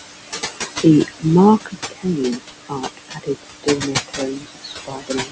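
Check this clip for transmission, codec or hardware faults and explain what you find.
Found two problems, both from the call's noise suppressor; the room noise, sitting about 7 dB under the speech, is just part of the recording.

Noise suppressor artifacts run throughout: the suppressor pulls steady-noise bands down by about 20 dB frame by frame, so the background sinks between phrases and rises under the words.

Speech cut by the noise suppressor shows up at 1.65 to 2.2 s and again from 2.68 s to the end. The suppressor mistook quieter bits of speech for noise and dropped them by about 20 to 21 dB, leaving soft sounds swallowed for roughly a third of a second, then about a second and a half.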